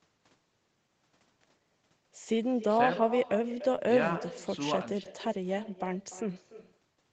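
Throughout the speech, every phrase is trailed by a fainter, thinner copy arriving roughly a third of a second later, about 14 dB below the original. This is echo with no canceller: the far end's loudspeaker feeds its microphone, and the returning sound is never removed.

At 3.75 to 3.82 s and again at 5.03 to 5.07 s, the sound briefly smears and wobbles. This is short concealed packet loss: about 20 ms of audio, which fits a single lost 20 ms packet, failed to arrive, and the decoder extended the preceding sound to fill the gap before blending back in.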